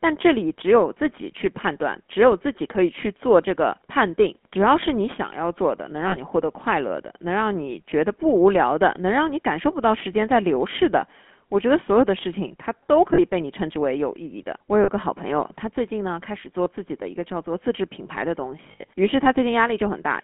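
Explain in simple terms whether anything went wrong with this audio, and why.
Throughout, the speech has a buzzy, gravelly roughness and sounds thin and boxed-in, like an old mobile call. That is the GSM full-rate codec, the original digital phone coding. It doesn't store the sound itself but a rough model of the throat and mouth, driven by a simplified buzz. Here the damage is plainly audible, and only the band from about 200 Hz to 3.4 kHz gets through, so the brightness is gone.

At several moments the sound briefly freezes into a short metallic ring: 6.08 to 6.17 s, 13.14 to 13.19 s, 14.84 to 14.90 s, and 16.64 to 16.67 s. From 18.72 to 18.89 s there is a cluster of these, with the longest stretch lasting well under a tenth of a second. These are lost GSM frames. When pieces of the signal went missing, the decoder repeated the last good piece, which produces that ringing hold.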